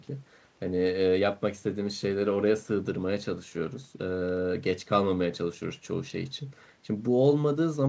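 No technical faults turn up in this speech; it passes through a wideband call path whose content stops at 8 kHz, consistent with a codec such as G.722 at around 64 kbps.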